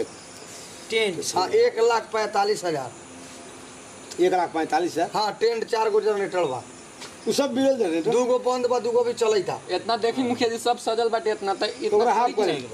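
Nothing stood out on listening; no technical problem could be heard at any point in the audio.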